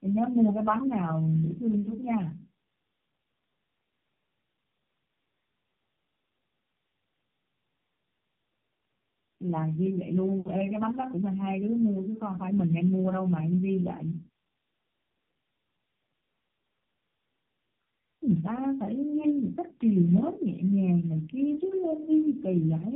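Speech throughout shows tandem speech coding: three low-rate codecs in a row (G.729A, then AMR-NB at 7.4 and 5.9 kbit/s), each re-encoding the last one's damage, with nothing above 3.6 kHz. The stacked roughness and warble exceed what any single codec would produce.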